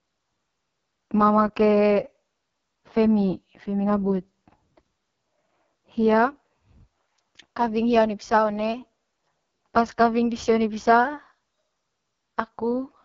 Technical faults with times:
0.00-13.05 AMR wideband (HD Voice) codec

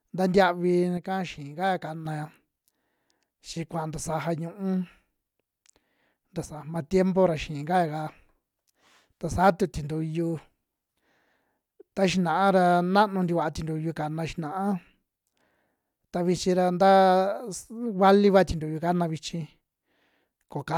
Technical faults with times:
0.97-2.05 one channel drops out
6.45-6.75 one channel drops out

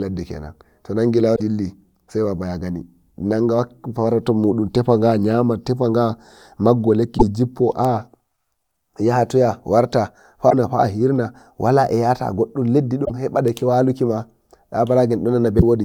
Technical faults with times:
1.32-1.40 damaged data in a compressed stream
7.15-7.23 damaged data in a compressed stream
10.46-10.53 damaged data in a compressed stream
13.02-13.11 damaged data in a compressed stream
15.56-15.62 damaged data in a compressed stream

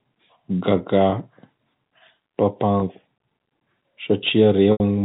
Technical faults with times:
1.10-1.12 packet loss with pitch repetition
2.80-2.82 packet loss with pitch repetition
4.72-4.80 packet loss with pitch repetition

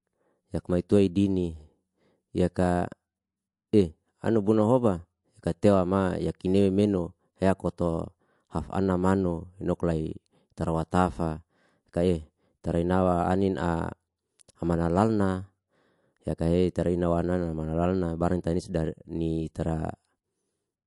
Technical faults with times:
0.00-20.86 MP3 compression

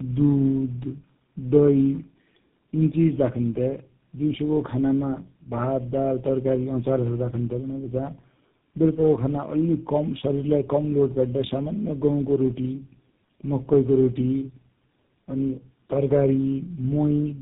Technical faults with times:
0.00-17.41 tandem speech coding

